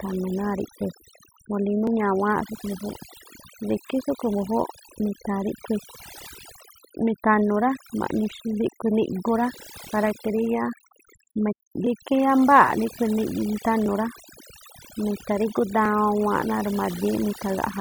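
Throughout, the speech sits over a near-silent background with twinkling specks: overdone noise removal, where bands near the estimated noise floor were cut along with quiet speech detail. From 1.87 s to 15.85 s, small ticks recur every 2.0 s, roughly seven of them: periodic USB or driver dropouts, each skipping about a millisecond of audio.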